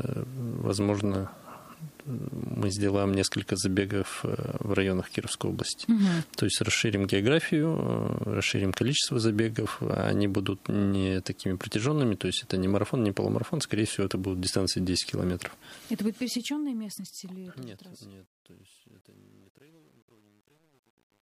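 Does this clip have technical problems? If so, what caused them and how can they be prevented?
Yes. Truncation distortion on a fade runs from 15.48 to 21.25 s and is worst from 16.78 s. The undithered fade-out, which sounds like 9-bit truncation, turns the tail gritty and stepped. To prevent it, apply fades at high word length and add dither before any bit-depth reduction.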